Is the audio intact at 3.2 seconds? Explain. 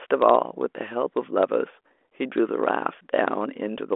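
Yes, the audio is intact at 3.2 seconds: it carries the narrow telephone band of a G.726 ADPCM link at 40 kbit/s, with nothing above about 3.8 kHz, and no fault occurs at that moment.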